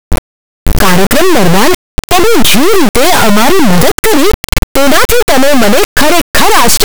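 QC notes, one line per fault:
Throughout: integer read as float. The speech is replaced by an extremely loud, harsh buzz, a square-wave rasp that slams between silence and the clipping ceiling, dropping out to near silence wherever the speech goes very quiet. The samples were written as 32-bit integers but read back as 32-bit floats, so each bit pattern decodes to a value that is tiny, invalid or vastly over full scale, and the output snaps between zero and the clip limit.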